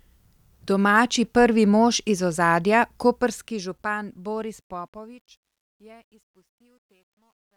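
Truncation distortion on a fade runs from 3.03 s to the end at 7.57 s, where the speech fades out from around 3 s. The fade stage keeps too few bits and adds no dither, so the gritty, stepped texture fits an 11-bit path. As the level sinks toward the smallest step, the waveform collapses into coarse square steps. From 5.36 s to 7.57 s the tail turns rough and gritty.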